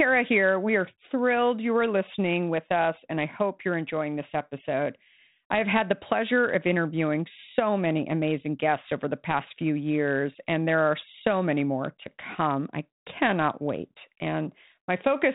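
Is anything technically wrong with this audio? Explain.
No, nothing is technically wrong: the speech comes over a 32 kbit/s G.726 ADPCM telephone path that carries nothing above 4 kHz and leaves only the light coding texture expected at that rate.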